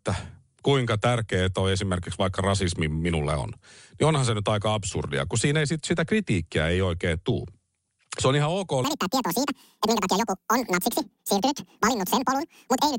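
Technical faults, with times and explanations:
8.84 to 12.99 s, wrong sample rate: right after "se on ihan ok" the speech suddenly runs at double speed and jumps a full octave, 12 semitones up, staying that way to the end. Speed and pitch moving together by exactly 2x means the samples were played back at twice the rate they were captured at with no conversion, which fits audio recorded around 22 kHz being played at 44.1 kHz.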